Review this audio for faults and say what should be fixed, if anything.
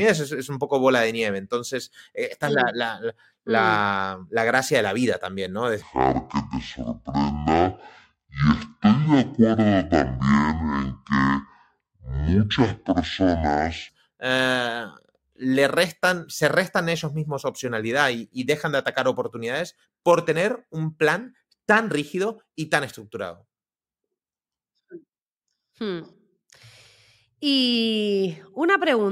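Section at the wrong speed, from 5.82 s to 13.89 s, ending just before "eh le restan se". The speech in this stretch plays at 0.511 times its proper rate, so it drags and drops roughly ten semitones, sounding deep and slow, then snaps back to normal. Pitch and tempo fall together, so the likely cause is an editor or player running this segment against the wrong clock. Fix it by resampling that section back to its original speed.

To prevent it, check that every segment's clock rate matches the session's before joining or exporting.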